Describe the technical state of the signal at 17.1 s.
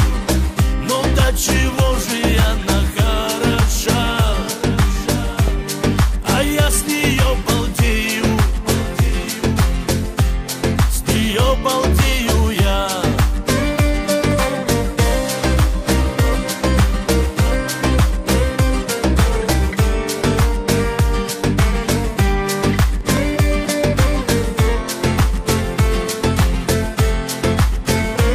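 At 17.1 s the signal carries the same damage heard across the whole clip, most likely from MP2 compression at a low rate, which fits something near 80 kbps. MPEG Layer II divides the spectrum into 32 sub-bands and shares a bit budget among them; starved of bits, it shuts off upper bands and quantises the rest coarsely. The result is a dulled top end, bands flickering in and out, and a plainly audible gurgling, granular distortion.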